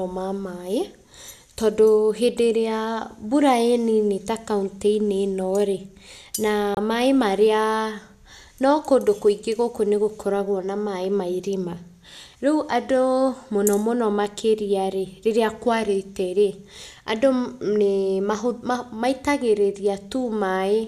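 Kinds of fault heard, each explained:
digital broadcast dropout: The speech cuts abruptly to silence for a brief gap at 6.75 to 6.78 s, then resumes on "maĩ marĩa". The receiver muted because a frame failed to arrive intact, and that audio is gone. The roughly 24 ms hole fits a single lost frame.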